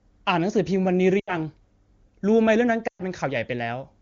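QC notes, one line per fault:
1.19–1.36 s and 2.87–3.03 s, lost AMR speech frames: the wideband decoder conceals missing frames by repeating the last good pitch and vocal tract settings at falling gain. Each gap drops to near silence within two frames, which fits roughly 80 ms and 120 ms of lost frames. On a spectrogram the harmonics freeze into flat horizontal bands. On the waveform the envelope decays toward silence, and speech resumes briefly weak.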